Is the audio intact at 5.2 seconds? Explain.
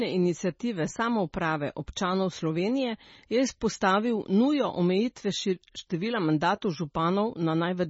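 No. At 5.2 seconds, as throughout the clip, the speech has a hard treble ceiling at 7.7 kHz and a watery, swirling texture with smeared consonant attacks. This is likely heavy MP3 compression, consistent with a bitrate near 24 kbps, where weak frequency lines drop in and out between frames.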